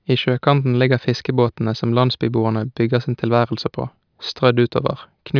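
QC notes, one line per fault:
No faults heard in the speech. Nothing here calls for a QC entry.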